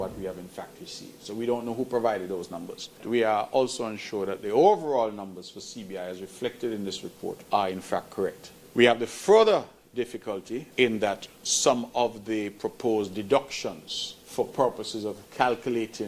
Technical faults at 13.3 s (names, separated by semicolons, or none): none